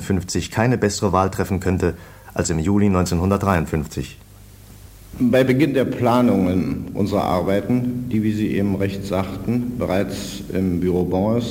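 From 3.02 s to 11.02 s there is sample clock jitter. The converter's clock wobbles by roughly ten microseconds. Samples land early or late, so steep waveform slopes pick up error. It sounds like a rough hiss, about 30 dB below the sound, rising with loud and bright passages.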